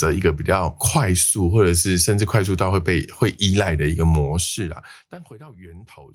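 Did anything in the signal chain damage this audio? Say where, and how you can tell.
No damage anywhere in the chain.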